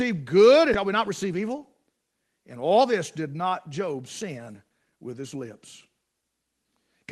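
Skip ahead at 0.73 s in this speech clip: playback jumps forward with no filler, dropping roughly a second of audio that was discarded while later audio already waited, so the sound on either side is butted together almost directly. Jitter buffer speed-up follows from 0.85 to 1.94 s at 107% and from 2.56 to 4.54 s at 112%. The buffer, left holding more audio than it targets, repeatedly cuts out short pitch-period pieces, about 100 ms and then about 200 ms in total, so the speech sounds hurried at unchanged pitch.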